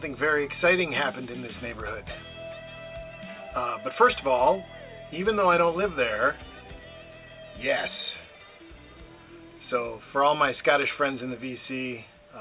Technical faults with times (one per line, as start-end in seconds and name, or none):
none